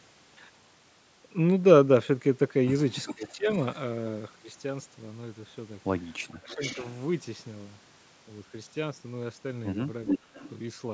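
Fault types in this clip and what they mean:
Echo leak: A delayed copy of the speech returns about 0.41 s late, in short scraps around 3.1, 3.5, 6.5 and 10.1 to 10.5 s, from about 25 dB down to as loud as the speech itself; likely a far-end loudspeaker echo the canceller failed to remove.
Speech suppressed in double talk: The speech briefly ducks by roughly 20 to 25 dB, a dip of a few tenths of a second near 3.1, 6.3 and 10.2 s, while both sides overlap; likely the echo canceller mistaking the talker for echo and turning everything down.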